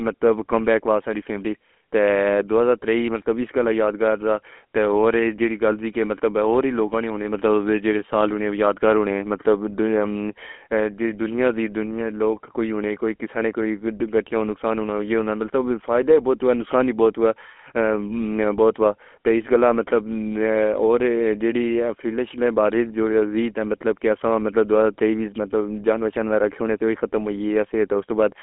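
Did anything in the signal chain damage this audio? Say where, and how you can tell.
Yes. The damage is at the codec stage: the speech has been through the GSM full-rate codec for the whole clip. Its buzzy, gravelly roughness comes from resynthesising the voice through a vocal-tract filter driven by a coarsely coded pulse excitation, which fits about 13 kbps. On a spectrogram the energy is confined to a telephone band of roughly 250 Hz to 3.4 kHz, and voiced stretches show smeared, grainy harmonics instead of clean striations.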